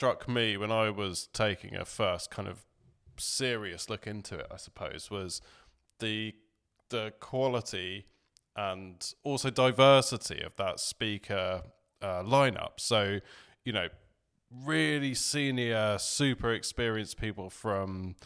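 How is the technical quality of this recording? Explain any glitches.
No glitches can be heard anywhere in this recording.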